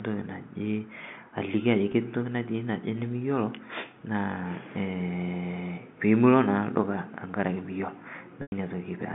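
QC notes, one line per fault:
1.92–1.94 s and 8.42–8.52 s: packet loss with pitch repetition. The receiver bridges each gap by repeating the last pitch period. The 20 ms loss, consistent with one packet, sounds like a brief buzzy hold. The 100 ms loss, consistent with about five packets, sounds longer and fades toward silence before a cross-fade back. The telephone band, about 150 Hz to 3.6 kHz, is heard throughout.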